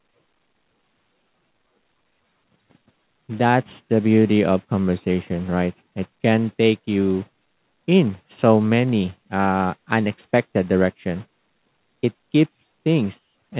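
No technical faults can be heard in the speech, which carries nothing above 4 kHz as expected for a narrowband call path of the G.711 A-law kind.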